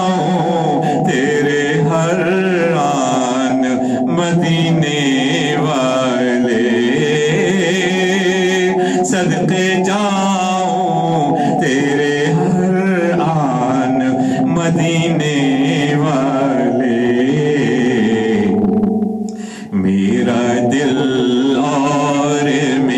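Hard clipping runs through the whole clip: the signal is driven about 5 dB past what one stage can pass, so peaks are sliced flat. Only a small share of samples, around two percent, hit the limit, adding high harmonics heard as crackle on loud moments.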